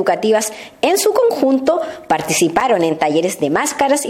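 At about 2.60 s there's a gap between stream segments: two 2.0 s chunks don't quite butt up in their timing, so the player fills roughly 7.3 ms with silence. You hear a tiny hard-edged dropout, with nothing missing, just pushed slightly later.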